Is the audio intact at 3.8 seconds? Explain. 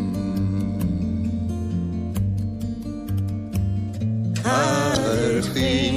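No. At 3.8 seconds the sound is watery and swirly, with smeared attacks, as it is through the whole clip. The likely cause is MP3 compression at a low bitrate, around 64 kbps. Starved of bits, the encoder drops weak frequency lines frame by frame.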